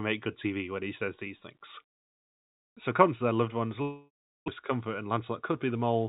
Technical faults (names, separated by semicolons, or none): long network dropout